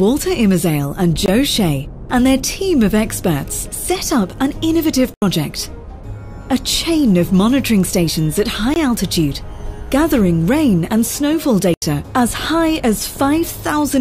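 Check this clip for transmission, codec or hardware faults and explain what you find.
There are four dropouts to digital silence. The audio snaps to nothing and back: short 20 ms holes at 1.26–1.28 s and 8.74–8.76 s, and longer 80 ms gaps at 5.14–5.22 s and 11.74–11.82 s. These are blocks of digital silence, where stretches of samples were replaced by zeros with no fade in or out, likely because the output buffer went unfilled in time.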